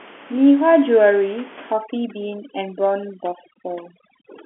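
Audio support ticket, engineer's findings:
Overdone noise removal, 1.73 s to end. Background drops and breaks up into twinkling specks. Suppressor gating bands near its noise estimate, taking quiet speech detail too.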